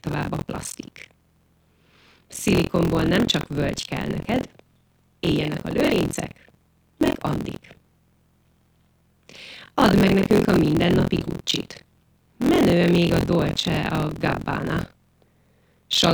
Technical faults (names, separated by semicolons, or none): buffer tearing